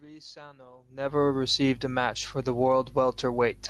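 The automatic gain control judged the input too loud, or its background too strong, just after "received a match for" and pulled its gain down by about 4 dB between 2.46 and 2.91 s. This automatic gain falling makes the speech sink, with the room noise behind it dropping by the same amount, over roughly half a second.

Overlapping the end of that dip, the control reversed and decided the input was now too quiet, raising its gain by about 4 dB from 2.83 to 3.34 s. This automatic gain rising makes the speech and its background swell back up together, so the level dips and then recovers within about a second.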